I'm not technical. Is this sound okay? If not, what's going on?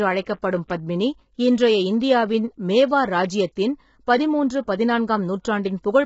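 No. Throughout, the speech sounds rough and grainy, with the crisp top end missing above 7.7 kHz, likely from heavy low-delay AAC compression of the kind video calls use. At 0.68 s, a short hiss comes just before a sharp sound, softening its start. This is pre-echo: the compression spreads its noise slightly ahead of sudden sounds.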